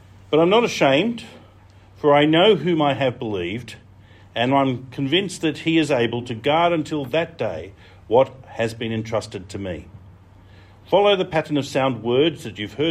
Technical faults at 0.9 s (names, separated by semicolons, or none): none